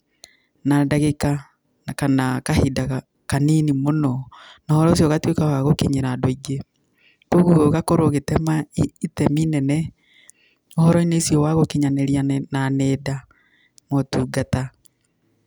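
Nothing in this recording of speech calls for comment, since there are no technical faults to point to anywhere along the way.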